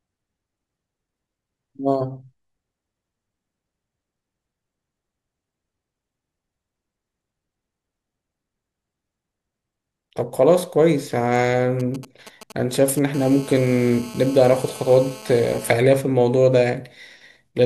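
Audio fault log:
11.80–12.99 s, GSM signalling bursts: A nearby 2G phone is exchanging short signalling bursts with its network, and the audio circuitry rectifies the radio pulses. The result is a galloping dit-dit-dit of ticks and brief 217 Hz buzzes, roughly 20 dB below the speech.
13.14–15.72 s, GSM phone buzz: The phone now holds a call and transmits bursts 217 times a second without a break. Each radio pulse is rectified into the audio, producing a steady, hard, raspy 217 Hz buzz rich in harmonics, about 21 dB below the speech.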